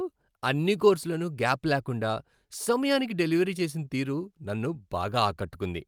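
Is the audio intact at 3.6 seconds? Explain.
No. Clock drift between sender and receiver affects the whole clip. The sender's clock runs about 3% slow, so the receiver's buffer keeps draining. Repeated timing corrections run from 0.03 to 5.86 s. The receiver repeats short pieces, stretching playback to 97% speed. This adds about a fifth of a second, and the small edits are heard, if at all, as slight hiccups or an unsteady tempo.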